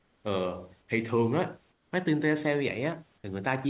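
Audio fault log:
0.00–0.24 s and 1.72–1.92 s, comfort noise in place of the background: the room hiss becomes smooth, featureless and about 4 and 6 dB quieter, likely from discontinuous transmission filling pauses. Spectrogram shows flat, uniform texture; waveform dips slightly.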